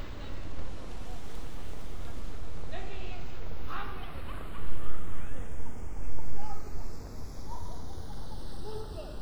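From start to finish, the channels are drifting apart. Left and right seem to run on separate clocks, roughly 30 ppm off, so the gap between them creeps up to a fraction of a millisecond. Folded to mono, that sliding delay sweeps comb notches slowly, giving a slow flanging.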